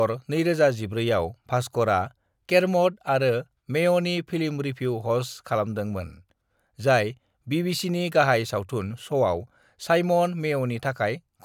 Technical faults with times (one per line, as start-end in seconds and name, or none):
none